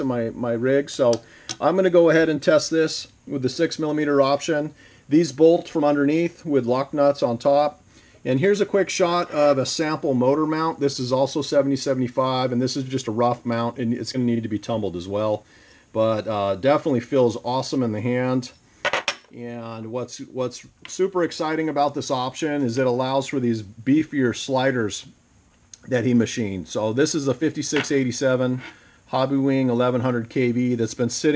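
No technical faults can be heard in this clip. It has passed through a call path that is working as designed, with nothing above 8 kHz, which fits a wideband call codec such as G.722.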